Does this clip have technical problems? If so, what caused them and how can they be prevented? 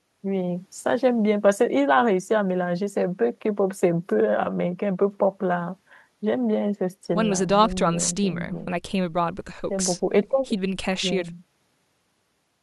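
No, the speech signal shows no audible technical faults, so there is nothing to trace to a cause or prevent.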